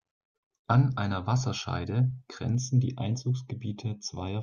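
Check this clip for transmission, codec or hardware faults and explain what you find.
One fault is present, from 2.55 s to the end of the clip at 4.43 s: channel delay (comb filtering). One channel arrives roughly a third of a millisecond behind the other, and when the pair is folded to mono the shared speech cancels at regularly spaced frequencies, the first notch sitting near 1.5 kHz. The result is a hollow, phasey coloration from 2.55 s onward.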